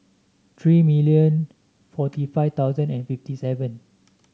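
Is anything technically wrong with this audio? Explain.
No, the speech signal comes through without any audible technical fault.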